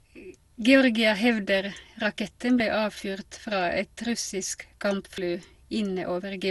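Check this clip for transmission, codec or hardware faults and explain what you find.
Two kinds of fault turn up: generation loss across the whole speech clip, and two dropped buffers that skip the audio forward.

Generation loss runs throughout. The speech sounds swirly, hollow and smeared, and consonant attacks blur. That fits the likely cause: around ten passes through MP2 at about 96 kbit/s, each re-quantising on a fresh frame grid, so the damage piles up.

Dropped buffers (overruns) land at 2.60 s, between "hevder raketten" and "avfyrt fra et russisk", and at 5.18 s, just after "avfyrt fra et russisk". Each is an abrupt jump in the sound, no gap, consistent with roughly 50 ms lost when the hardware overwrote samples before they were collected.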